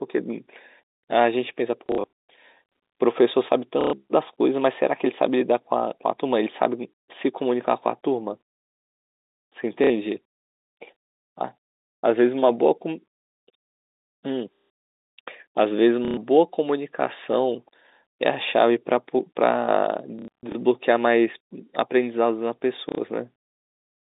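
A telephone speech clip carried over G.711, with the narrow band of a phone line. It has packet loss with the last packet repeated. Stutters occur at 1.86–2.04, 3.81–3.93, 9.84–9.90, 11.83–11.92, 14.55–14.70, 16.05–16.17, 20.19–20.55 and 22.89–22.98 s. Each gap is filled by replaying the previous packet. The loops do not match the pitch, and the runs buzz robotically. The spacing points to 30 ms packets, giving a buzz near 33 Hz.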